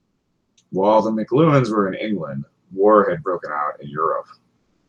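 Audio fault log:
0.00–0.57 s and 4.57–4.88 s, comfort noise in place of the background: the pauses before and after the speech hold a steady, featureless hiss, about 3 dB and 2 dB quieter than the real background. This is likely Opus DTX halting transmission during silence and the receiver synthesising noise shaped like the background.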